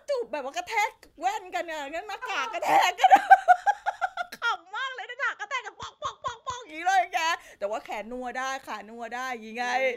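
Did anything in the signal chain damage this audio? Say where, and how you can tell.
Yes. At the capture device stage, the input likely switched to a poorer device from 4.56 to 6.69 s. The speech abruptly loses everything above 7.6 kHz and turns a few decibels quieter. A faint new noise floor appears. No gap marks either change.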